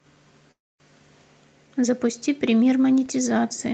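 At 0.51 s the speech halts and stays stalled until 0.83 s. A brief tail of the last sound trails off and is followed by roughly a quarter-second of silence. The speech then picks up exactly where it stopped. This is a call audio freeze, likely caused by packets arriving late enough that the jitter buffer ran dry. Unlike a packet-loss dropout, nothing is cut out. About 0.29 s of delay is inserted and all of the speech survives.

At 3.06 s a single low thump is heard as a DC step. The waveform's zero line suddenly shifts and stays offset through to the end of the clip. This is the kind of jump a converter recalibrating or an offset input being switched in would produce. It differs from a clipping crackle or a dropout pop because the speech carries on intact and undistorted. Only the one bump at the moment of the shift gives it away.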